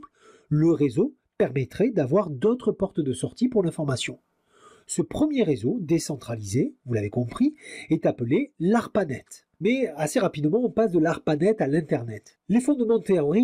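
Clock drift between sender and receiver runs through the whole clip: the sender's clock is about 5 percent fast, so incoming audio arrives quicker than it is played out and the receiver's jitter buffer keeps filling rather than holding a steady level.

From 0.51 s to 13.44 s this produces repeated timing corrections, with the receiver discarding short pieces to keep pace with the faster sender, an effective rate of 105 percent. The cuts are small and unevenly spaced, heard, if at all, as slight hiccups or an unsteady tempo.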